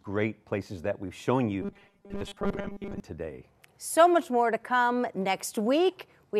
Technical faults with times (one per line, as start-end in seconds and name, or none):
1.62-3.00 robotic sound from repeated short buffers